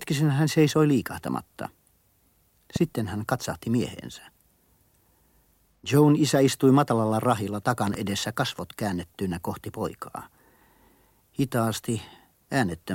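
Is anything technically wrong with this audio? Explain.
Yes, the speech has two loud pops. At 2.76 to 2.78 s there is a single pop, and at 7.87 to 7.97 s a pair in quick succession, each peaking around 10 dB above the speech, which continues underneath. A voltage spike, likely from a plug, switch or static discharge, was added to the signal. The waveform shows tall, narrow spikes, and the spectrogram shows thin vertical broadband lines.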